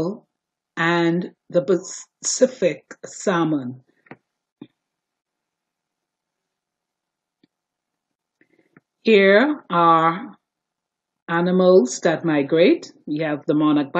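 No technical faults can be heard anywhere in the clip. Nothing in the sound points to a problem in how it was captured, carried or played back.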